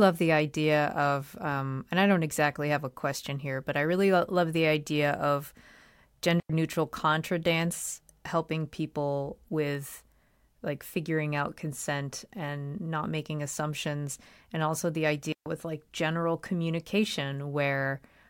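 Digital wireless dropouts at 6.40 s, about 97 ms just before "neutral contra dance helping", and 15.32 s, about 137 ms between "assumptions and also the" and "with like general": the receiver lost too much data and muted, leaving clean near-silent holes without noise bursts.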